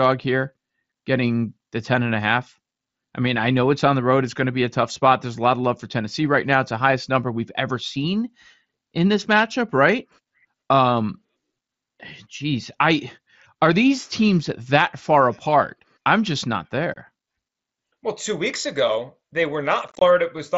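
Unconcealed Bluetooth headset packet loss strikes at 16.94–16.96 s, where voice packets between headset and phone go missing over the mSBC link and nothing fills the gap. The speech drops out for about 22.5 ms with hard edges, which fits a few lost packets. At 19.88–20.02 s the losses scatter: about 82.5 ms of speech vanishes across 135 ms, in runs of up to 22.5 ms, giving a rough, chopped crackle.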